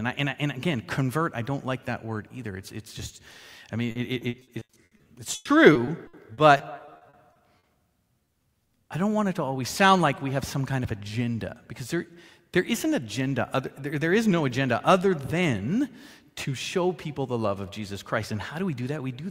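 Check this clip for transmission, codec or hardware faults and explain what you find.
Two transmission faults are present, both from lost audio data that the receiver had to cover up.

Repeated packet loss (robotic sound) runs from 3.91 to 7.65 s. Around two dozen gaps open in close succession, totalling 800 ms, with none longer than 100 ms, so about 21% of the span is filled in rather than received. Each time, the decoder extends the preceding sound to bridge the hole, and the next gap arrives before the audio settles. The result is a choppy, robotic texture with pieces missing.

Short concealed packet loss occurs between 8.25 and 8.29 s. About 20 ms of audio failed to reach the decoder in time. The receiver covered it by carrying the last sound forward, following its pitch if tonal or using shaped noise if not, then crossfaded back into the real signal. This leaves a brief smear or wobble right after the robotic stretch ends.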